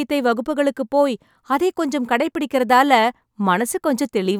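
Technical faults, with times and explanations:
No technical faults are audible.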